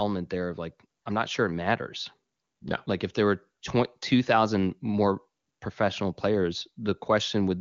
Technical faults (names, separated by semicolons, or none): none